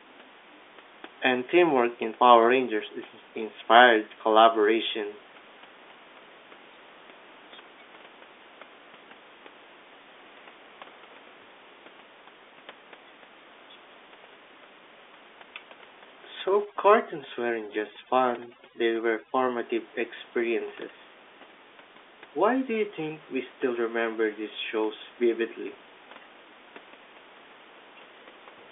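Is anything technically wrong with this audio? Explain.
Yes. From 16.65 to 19.57 s, the background drops and breaks up into twinkling specks. This is overdone noise removal cutting every band that sits close to its noise estimate.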